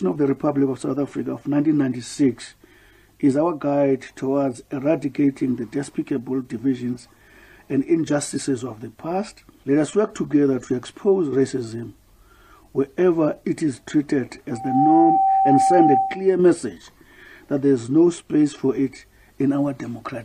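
The audio has a loudspeaker feedback squeal from 14.51 to 16.36 s: a single tone at 774 Hz swells over roughly a third of a second and sits a few dB above the rest of the sound. The mic is picking up its own speaker, and the loop gain tops one at that frequency.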